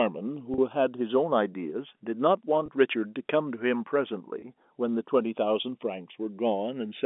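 Throughout the speech, channels drifting apart: separate clocks, off by around 100 ppm, let the inter-channel delay creep to about half a millisecond, heard as slow flanging in mono. At 0.54 s, packet loss with pitch repetition fills a 40 ms gap, consistent with two lost packets, by repeating the last pitch period, giving a brief buzzy hold; single 20 ms losses recur at 2.66 s and 4.40 s, each a shorter held buzz, all heard through the narrow telephone band of the G.711 link.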